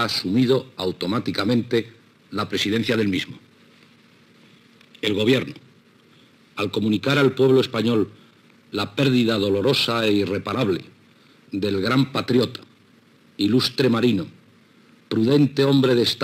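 Throughout, a gritty, inharmonic fizz trails loud and bright moments, sitting roughly 25 dB under the sound. It is crude rate conversion: samples repeated without filtering, which fits a 44.1 kHz to 48 kHz change.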